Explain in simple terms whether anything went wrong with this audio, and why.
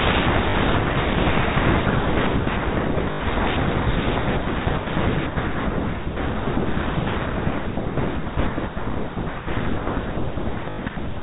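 Three short robotic stutters come from packet loss with the last packet repeated, at 0.50 to 0.54 s and again at 3.12 to 3.20 s and 10.70 to 10.78 s. Chunks of audio went missing, so the receiver replayed the last good chunk, with a buzz consistent with 20 ms packets, through the narrow telephone sound of G.711 coding.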